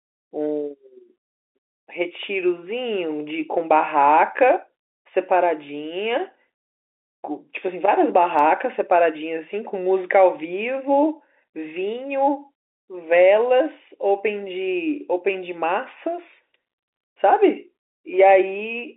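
There are no technical faults anywhere in this speech.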